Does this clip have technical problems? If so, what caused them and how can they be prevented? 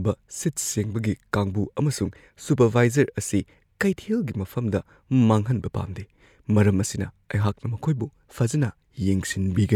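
No, there are no technical problems to point to in this clip. Since nothing went wrong, there is nothing here that calls for a preventive measure.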